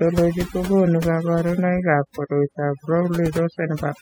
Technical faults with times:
0.00-4.01 overdone noise removal

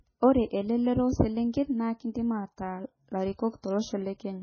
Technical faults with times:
0.00-4.43 MP3 compression

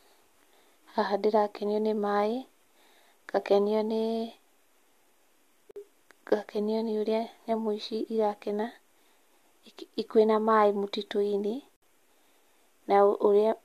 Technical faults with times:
5.71-5.76 gap at a join of encoded pieces
11.76-11.82 gap at a join of encoded pieces

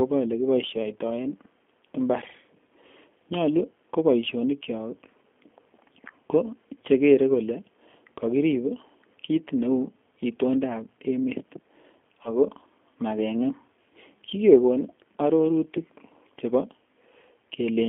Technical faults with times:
0.00-17.89 G.729 codec
12.23-12.31 VoIP packet loss concealed by the speech codec

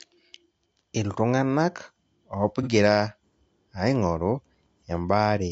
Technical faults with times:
0.00-5.51 low-delay AAC compression
2.62-2.68 AAC frame loss with concealment

